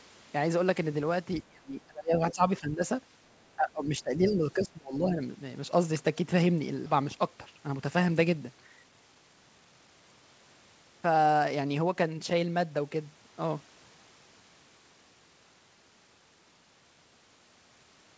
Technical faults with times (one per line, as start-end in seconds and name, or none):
1.43-2.84 speech suppressed in double talk
3.56-5.21 speech suppressed in double talk
6.86 skip ahead
8.70-9.88 jitter buffer speed-up